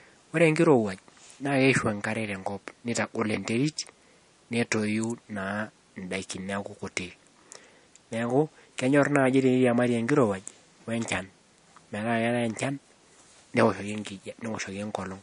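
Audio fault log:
throughout, MP3 compression: nothing remains above about 10.6 kHz, and the speech has a plainly audible watery, swirly quality, with s sounds chirping metallically and attacks smeared. This is likely a low bitrate near 42 kbps forcing the encoder to drop the treble and let weak frequency lines flicker frame to frame.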